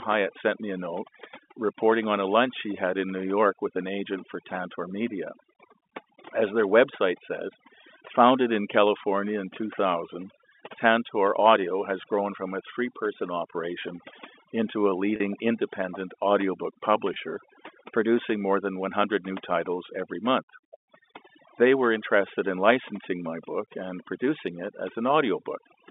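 From start to finish the background falls to near silence broken by twinkling specks. This is overdone noise removal. The noise reduction was set so strong that any frequency band close to its noise estimate was pushed far down or switched off, and the quieter parts of the voice were removed along with the noise. The telephone band, roughly 250 Hz to 3.6 kHz from the G.711 line, narrows the sound further.

At 15.16 to 15.20 s, just after "person operation into a" and before "independent audiobook", the voice briefly locks onto a held, buzzy tone. At 17.14 to 17.16 s, just after "independent audiobook", a shorter version of the same thing happens. Both are packet loss with pitch repetition. Audio went missing, about 40 ms in the first gap and 20 ms in the second, which fits two 20 ms packets and then one. The receiver filled each gap by repeating the last pitch cycle.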